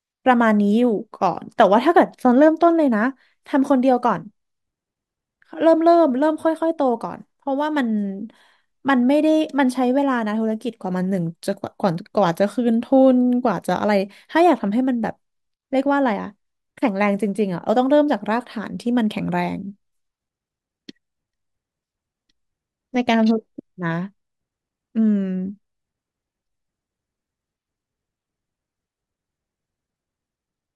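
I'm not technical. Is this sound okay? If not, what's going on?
Yes, this speech recording sounds fine. Nothing goes wrong with the sound at any point in it.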